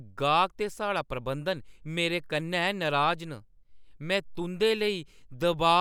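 Speech, no audible technical faults.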